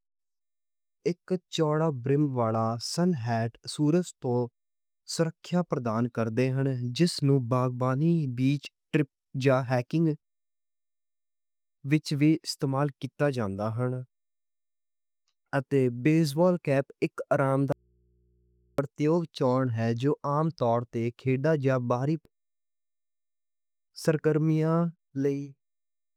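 It's a speech clip with one clear audio dropout to a faint residue. Right after "اک آرام", at 17.72 s, the speech cuts off abruptly and doesn't return until 18.78 s, just before "یوگ چون ہے جو". That's about 1.06 s of missing signal, with only mains hum left, sitting around 40 dB below the speech. It most likely comes from the source being briefly disconnected while the input stayed open and live.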